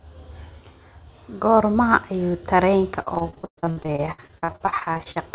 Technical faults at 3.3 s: repeated packet loss (robotic sound)

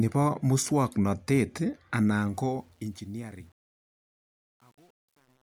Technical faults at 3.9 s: truncation distortion on a fade

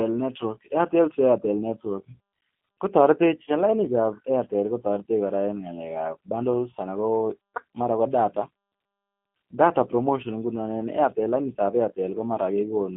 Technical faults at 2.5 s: G.729 codec

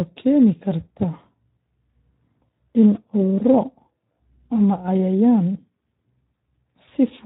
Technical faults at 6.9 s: Speex codec; VoIP packet loss concealed by the speech codec

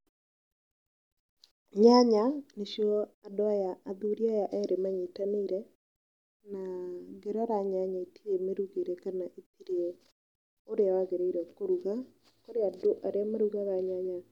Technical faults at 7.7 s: none

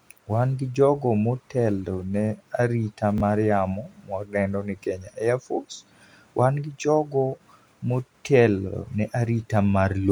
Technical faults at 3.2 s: chunks out of order

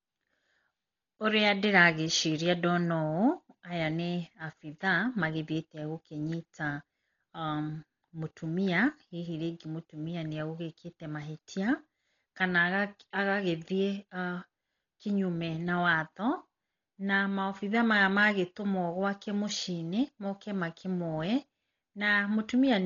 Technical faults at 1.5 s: Dolby Digital compression

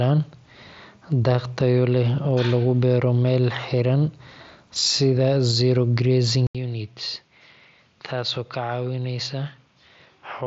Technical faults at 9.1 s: input switched to a poorer device

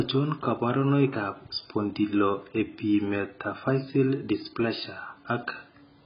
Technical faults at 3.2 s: AAC compression

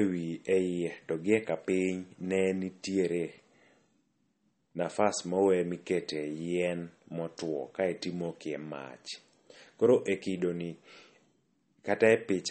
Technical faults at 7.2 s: MP3 compression

